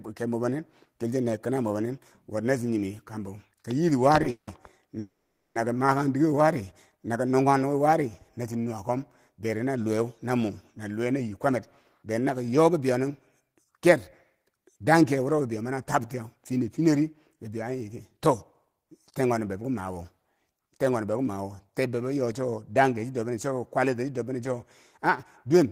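It's a speech clip with two kinds of glitch. First, a pair of call audio freezes. At 4.30 to 4.49 s and again at 4.99 to 5.57 s the sound stalls and the last bit gets stretched into a fading buzz, with about 60 ms and 50 ms of actual silence inside. Then it picks up right where it left off before "kom ma kan", so nothing's lost but the delay grows by 170 ms and 560 ms. That's likely packets held up in transit and the jitter buffer running dry. Later comes jitter buffer speed-up. From 10.98 to 16.01 s and again from 16.79 to 18.85 s, just before "ten kwanob bebo ki", the speech runs at about 108% with the pitch unchanged, so it sounds a bit rushed. The receiver is shaving off tiny pitch-period-sized slices over and over to drain a buffer that had filled past its target, cutting roughly 0.4 s in the first stretch and about 0.2 s in the second.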